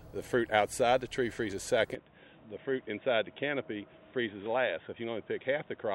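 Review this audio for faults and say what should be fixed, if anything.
From 1.95 s to the end, the sound turns abruptly duller and boxier, with nothing above 3.8 kHz, a drop of roughly 5 dB and a faint new noise floor about 40 dB below the signal. There is no gap at the transition. The cause is likely the input switched to a poorer device, a narrower-band microphone taking over mid-recording. On a spectrogram the upper band is cut off sharply at 1.95 s, and the waveform envelope steps down there. Locking the input device for the duration of the recording would prevent it.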